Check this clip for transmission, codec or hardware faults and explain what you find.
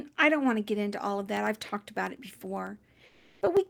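Two faults are present, both in the speech clip.

Periodic USB or driver dropouts begin at 1.27 s, just after "get into all of", and continue to the end. Every 0.1 s a brief slice of audio is replaced by silence, giving evenly spaced ticks under the speech. The strict metronomic spacing separates this from random packet-loss clicks.

Comfort noise replaces the background from 3.05 to 3.41 s, for 360 ms. The real background, about 31 dB below the loudest speech, gives way to smooth, featureless hiss about 6 dB quieter. That is likely Opus DTX filling a pause, and unlike a noise gate the gap holds synthetic noise rather than silence.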